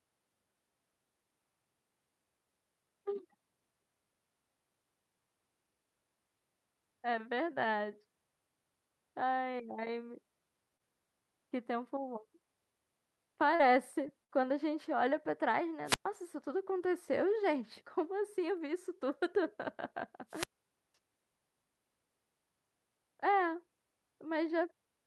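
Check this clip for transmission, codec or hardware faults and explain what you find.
There are three kinds of fault here: a handful of concealed packet losses, one short burst of packet loss, and two wireless microphone squelch dropouts.

Short concealed packet loss shows up four times, at 9.51–9.55 s, 10.77–10.81 s, 13.55–13.61 s and 14.07–14.10 s. In each case a packet's worth of speech didn't reach the decoder in time, roughly 20 ms at most spots and 40 ms at 13.55 s. The receiver papered over the hole by stretching the preceding sound forward and then blending back into the real signal. You hear a quick smear or tiny wobble in the voice, and a brief consonant can simply drop out.

The burst of packet loss sits at 14.24–14.31 s, right after the last of those small gaps. This time about 40 ms went missing in a row, and the concealment ran for about 45 ms. It extended the last sound while fading it down, so there's a short held buzz or fading hiss before the voice picks up again a little further along, with the material in between gone.

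Wireless microphone squelch dropouts happen at 15.85–16.06 s and 20.29–20.94 s. The radio link from the mic faded far enough that the receiver's squelch muted the output, for about 116 ms the first time and about half a second the second time. You get a quick swell of hiss or static, a hole of near silence, then the voice coming back, perhaps with a bit of noise riding on it.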